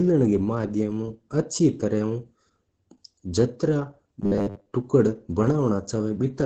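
Opus voice compression runs through the whole recording. The speech has been squeezed through the SILK linear-prediction coder at a rate low enough that the excitation is coded coarsely. The result sounds muffled and hoarse, with a faint robotic edge. Nothing is present above about 8 kHz, consistent with wideband operation, and the heavy damage fits a bitrate of around 10 kbps.

From 4.22 s to 4.73 s there is a robotic sound from repeated short buffers. Across most of this half-second stretch, the output is a rigid, metallic buzz at 100 Hz that only loosely tracks the speech underneath. The likely cause is new audio arriving too seldom, so the playback side loops the last 10 ms of sound and skips the real signal. That fixed repeat length imposes the 100 Hz pitch.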